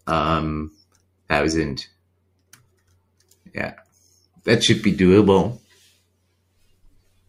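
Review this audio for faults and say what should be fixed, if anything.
A noise suppressor built for speech has been left running on this material the whole way through. It treats the steadier, sustained parts of the sound as background noise and pulls them down, while sharper onsets slip past mostly intact. The gain keeps swinging by around 20 dB, so the level pumps and flutters rather than sitting still, and held tones and any room tail come out thinner than they should.

You can hear the suppressor clamp down hardest in four stretches: 0.7 to 1.3 s, 1.85 to 3.57 s, 3.75 to 4.46 s, and from 5.58 s to the end. In each, sustained or decaying sound sinks by as much as about 21 dB, and decays get chopped short instead of fading naturally. The middle stretch is the longest, with well over a second pushed down.

The fix is to switch off speech-oriented noise suppression, or bypass it, for any path carrying music or general sound.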